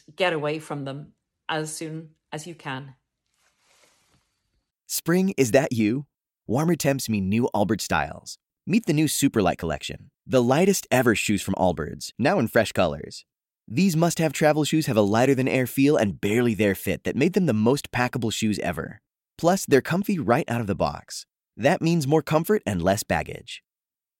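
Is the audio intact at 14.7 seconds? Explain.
Yes, at 14.7 seconds the speech plays through cleanly, with no dropout, click, distortion or other fault at that moment.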